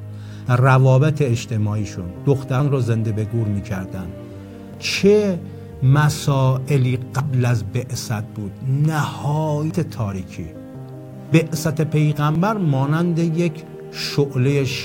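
Sudden forward jumps in the sound occur at 0.46, 2.60, 4.74, 7.20, 9.71, 11.29 and 12.35 s, each skipping roughly 50 to 150 ms with no gap of silence. This is likely a dropped buffer (overrun), with unread audio overwritten before capture.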